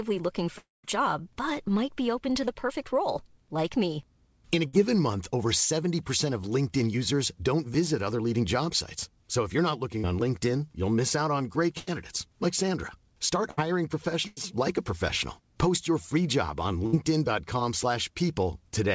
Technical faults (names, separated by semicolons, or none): long network dropout; burst of packet loss